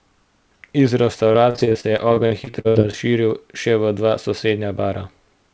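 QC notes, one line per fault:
1.32–2.95 s, repeated packet loss (robotic sound): eighteen short gaps in the stream, the longest 66 ms, with about 460 ms missing overall. Each gap is bridged by extending the previous sound, so about a quarter of the span is concealed and the speech turns choppy.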